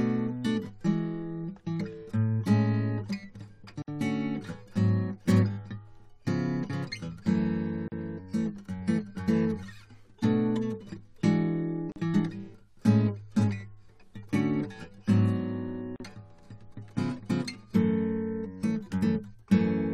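Abrupt dropouts cut into the music at 3.82 to 3.88 s (about 59 ms), then 7.88, 11.92 and 15.96 s (about 40 ms each), every 4 s, with smeared edges before playback resumes. These are gaps at joins of encoded pieces, where each piece's encoder delay and last-frame padding were left untrimmed.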